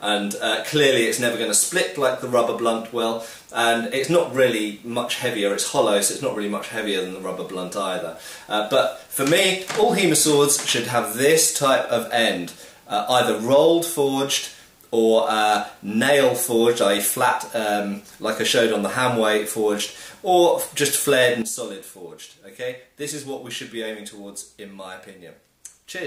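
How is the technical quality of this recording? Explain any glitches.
At 21.42 s the level falls by about 11 dB in a single step and stays down to the end. This sudden gain jump likely comes from a digital gain change applied instantly, without a ramp, so sound and background noise drop together. A waveform shows an abrupt envelope step, and a spectrogram shows a uniform darkening from 21.42 s onward.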